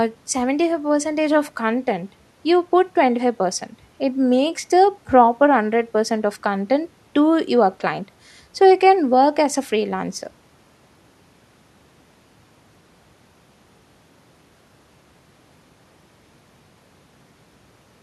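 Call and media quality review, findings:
No audible faults found in this speech recording.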